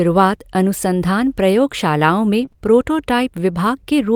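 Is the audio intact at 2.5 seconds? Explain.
No. From 2.41 to 2.58 s, a lost packet rebuilt from error correction plays a rough, noisier low-bitrate copy of one 20 ms packet. There is no gap, unlike true loss. Inside that span, short concealed packet loss starts at 2.45, 2.49 and 2.52 s. Each 20 ms hole is filled by extending the previous sound, which gives brief smears or wobbles instead of roughness.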